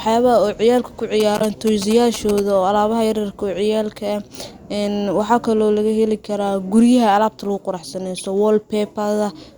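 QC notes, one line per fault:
1.20 to 2.40 s, GSM signalling bursts: A galloping dit-dit-dit of short buzzes sits about 10 dB below the speech. The buzz repeats at 217 Hz, the TDMA frame rate of a 2G handset. A nearby phone was exchanging brief signalling with its network rather than carrying a call. The audio circuitry rectified those radio pulses into the signal path, so each group of bursts came through as its own cluster of buzzes.
1.37 to 1.42 s and 8.16 to 8.21 s, corrupt frame decoded: Each is a short chirp or blip, roughly 50 ms long. The first is loud, peaking around -5 dBFS and overlapping the GSM buzzing. The second is softer, near -15 dBFS. Damaged bits in the compressed stream were decoded instead of concealed, so misread gains and codes put energy at the wrong frequencies. The first covers about three codec frames and the second about two.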